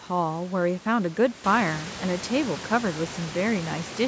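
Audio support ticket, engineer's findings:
No faults found in this clip.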